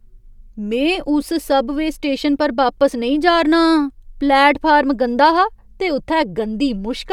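No technical faults are audible.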